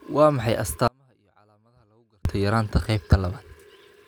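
At 0.88 s the speech drops out abruptly and stays gone until 2.25 s, about 1.37 s in all. It's an audio dropout to a faint residue: only a faint trace leaks through, roughly 40 dB down, likely because the signal path lost the feed while the chain after the break stayed live.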